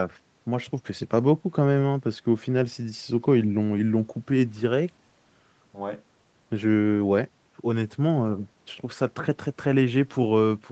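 The speech shows no technical faults: its content stops at about 8 kHz, consistent with a wideband call codec, and the bass roll-off from the call's microphone processing is normal for that path.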